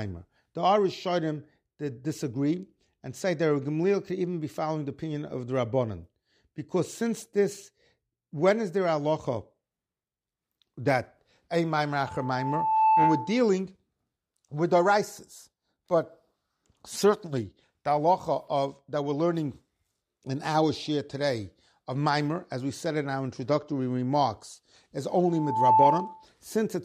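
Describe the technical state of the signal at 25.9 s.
A loudspeaker feedback squeal is in progress here, running from 25.29 to 26.26 s, just after the speech "our introductory remarks is". The microphone is picking up the loudspeaker it drives, and at 876 Hz the loop gain has passed unity, so that single tone reinforces itself on each pass. It swells over under half a second into a steady squeal sitting roughly 10 dB above the speech.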